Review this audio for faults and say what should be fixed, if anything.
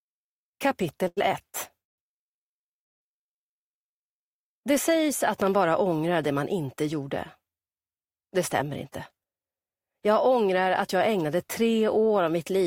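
A short stall from a late packet at 1.07 to 1.19 s holds the preceding sound for 93 ms while the jitter buffer waits, then resumes with nothing lost.

A call audio freeze at 1.84 to 2.00 s inserts about 140 ms of silence, likely from packets held up in transit draining the jitter buffer, before the audio continues from where it stopped.

A loud pop at 5.42 to 5.49 s is two sharp clicks about 10 dB above the surrounding sound, which continues underneath. The likely cause is a voltage step from a connector, switch or driver glitch.

A jitter buffer speed-up from 8.83 to 9.34 s plays the sound at 112% speed with unchanged pitch, trimming roughly 70 ms to shed the excess buffered delay.

To prevent these, stabilise the network path or enlarge the jitter buffer's target depth, and secure the connections and driver that produce the transient.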